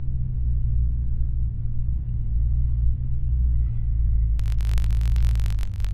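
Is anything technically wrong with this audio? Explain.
Yes. From 4.40 s to the end at 5.94 s, the filter restarts on every block. It loses its stored state and starts each block from silence. Each restart leaves a small transient. Together they form a buzz at about 46.9 Hz, which fits a 1024-sample block. The buzz rises and falls with the sound's level.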